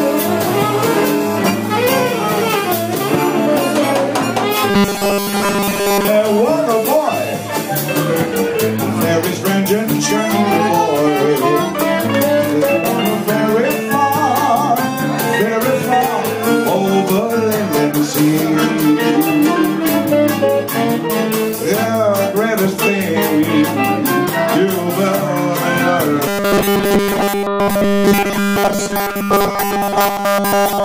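Robotic sound from repeated short buffers appears from 4.70 to 6.08 s and again from 26.28 s to the end, most likely because new audio arrived too seldom and each gap was filled by looping the last few milliseconds. The repeats impose a rigid 200 Hz buzz, which fits a loop about 5 ms long. Most of the first stretch and all of the final stretch sound metallic.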